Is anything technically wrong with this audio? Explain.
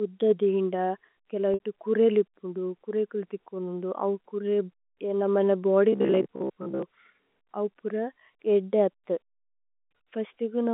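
Yes, two faults interrupt the speech, which runs over telephone-band G.711 coding (roughly 200 Hz to 3.6 kHz).

From 1.54 to 1.60 s there is packet loss with pitch repetition. About 60 ms of audio is missing, which fits three lost packets. The receiver repeats the last pitch period to bridge the gap, so the sound holds briefly as a buzzy note. This differs from the robotic fault because it is a single short event.

From 5.93 to 6.83 s there is a robotic sound from repeated short buffers. A rigid, metallic buzz at about 66.7 Hz persists for nearly a second. It is likely caused by audio arriving too seldom, so roughly 15 ms snippets are looped while about half the real audio is skipped. Unlike pitch repetition, the buzz holds a fixed frequency instead of following the voice's own pitch.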